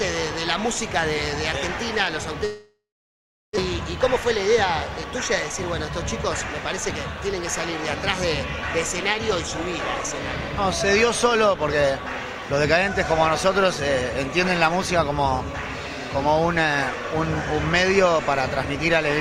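From 2.45 to 3.59 s the sound dissolves into a fading buzz that gives way to about 730 ms of silence, then resumes further along with about one second skipped. This is likely a long network dropout: the receiver stretched the last sound while nothing arrived. Between 10.93 and 11.84 s the audio plays at 104% speed with its pitch unchanged. This jitter buffer speed-up came from the receiver cutting short pitch-period slices, roughly 40 ms in total, to bring an overfilled buffer back down.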